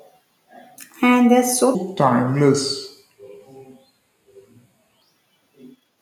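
Likely clocked wrongly on playback, 1.75 to 5.02 s is a section at the wrong speed: at 0.718 times, speech turns about five semitones deeper and slower.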